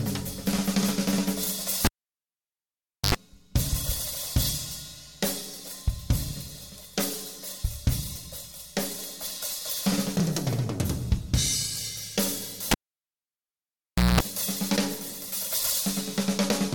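At 1.85 s the cable is pulled and plugged in. A pop is followed by about 1.25 s of near silence, then an 85 ms burst of 50 Hz mains buzz as only the tip makes contact, and a second pop when the sound returns at 3.15 s. At 10.20 s and 11.52 s the audio jumps forward, each time skipping a few tens of milliseconds with no gap of silence. That points to a likely dropped buffer (overrun), with the hardware overwriting samples before the software collected them. At 12.71 s the cable is pulled and plugged in again, with about 1.44 s of near silence and a longer 205 ms buzz at 60 Hz before the pop at 14.20 s. The replugs are set apart by their silence and hum, while the overruns skip ahead instantly.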